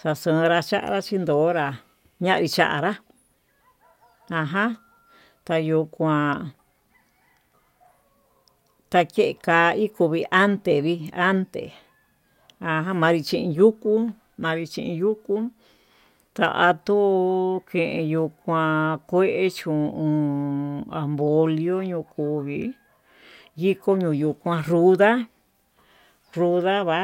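A speech recording, and nothing is technically wrong with it.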